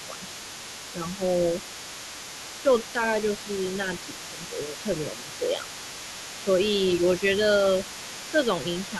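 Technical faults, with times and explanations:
Throughout, other side's voice leaking through: a faint second voice sits about 20 dB under the speech, likely residual loudspeaker echo, visible as weak, unrelated harmonic traces on the spectrogram.
0.06–0.6, 0.93–1.21, 2.63–2.98, 4.14–5.65, 6.45–6.49, 8.32–8.38 and 8.9–9.0 s, speech suppressed in double talk: the voice dips about 5 dB, about 10 dB at 2.63 s, likely the canceller ducking both sides at once, showing as brief envelope notches.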